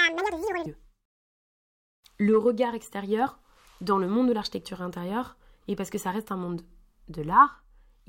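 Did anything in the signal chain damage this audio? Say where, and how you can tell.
Yes. Audio read two samples at a time (double speed), a sample-format conversion fault, affects 0.0 to 0.66 s. The speech runs at 2x speed, an octave high. A spectrogram shows time-squeezed syllables and harmonics spaced twice as wide.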